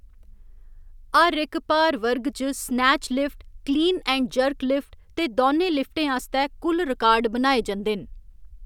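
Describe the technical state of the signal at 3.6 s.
At 3.6 s the speech signal is intact, with no audible fault at that moment.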